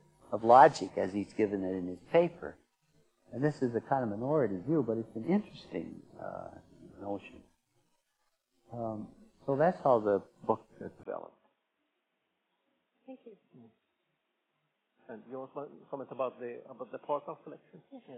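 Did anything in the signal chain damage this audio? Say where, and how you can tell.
Yes. At 11.03 s the input was likely switched to a poorer device, a driver-level change of capture source. After a 20 ms gap, the sound turns dull and boxy through to the end, with nothing above 3.8 kHz, the level down by roughly 10 dB, and a new noise floor around 45 dB under the signal. On a spectrogram, the upper band cuts off abruptly at that point, and the waveform shows a brief flat gap followed by smaller peaks.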